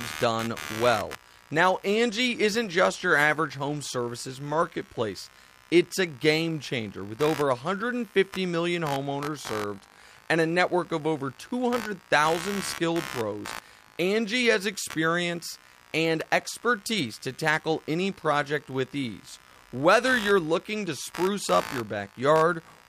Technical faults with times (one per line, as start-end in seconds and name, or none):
0.00-22.89 computer activity noise